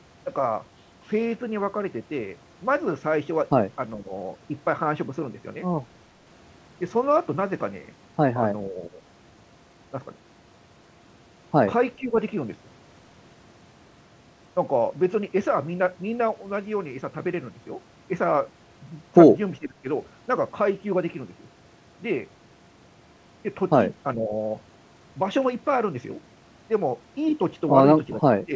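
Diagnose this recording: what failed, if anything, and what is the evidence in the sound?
Speech suppressed in double talk, a call-processing fault, at 4.0, 8.7, 11.98, 19.59, 24.15 and 28.45 s: brief dips of about 5 to 20 dB, likely from echo-canceller ducking.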